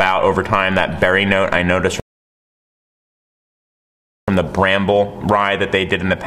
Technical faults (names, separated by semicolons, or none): rebuffering stall